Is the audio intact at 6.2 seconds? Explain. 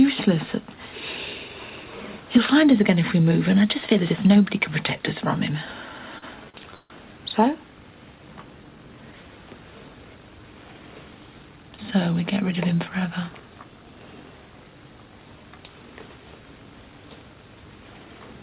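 No. From 6.18 to 6.24 s there is a short stall from a late packet: the jitter buffer emptied, so the last sound was stretched about 40 ms, held with a slight buzz or dip, before resuming without loss.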